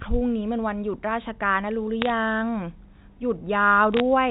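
Brief bursts of sharp ticking crackle cut across the speech from 2.02 to 2.10 s and again from 3.94 to 4.00 s. These are bit errors on a digital phone line, at a rate of a few tenths of a percent. Each flipped bit corrupts one sample of the telephone-band signal, which fits G.711 A-law coding at 64 kbps, and hits on the upper bits or on the sign of loud samples produce the sharp ticks.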